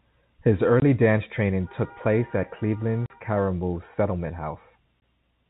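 Speech on a phone-band line, where G.711 coding caps everything at 4 kHz, has packet loss filled with silence: dropouts at 0.80–0.82 s, 3.06–3.10 s and 5.00 s, which fit losing one or two 20 ms packets.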